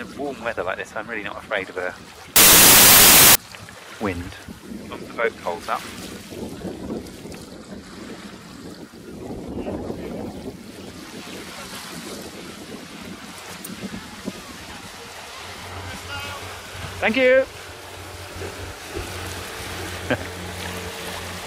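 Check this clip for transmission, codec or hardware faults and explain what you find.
One fault, from 2.36 to 3.35 s: a burst of loud, harsh broadband noise, samples built from the wrong bytes, where misassembled bytes let the rapidly changing low bits dominate each value.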